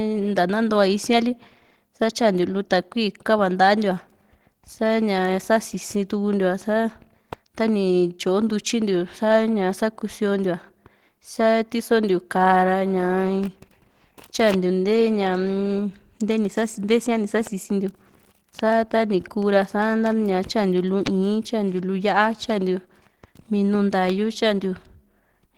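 No technical faults detected.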